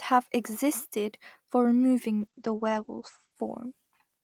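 At 2.2 s there's a call bitrate drop that lasts to the end. The bandwidth estimate fell and the encoder coarsened, which fits a fall from around 32 to 12 kbps. The top end gets cut from 20 kHz to 8 kHz, so the speech turns muffled and watery, bottoming out for about 1.13 s.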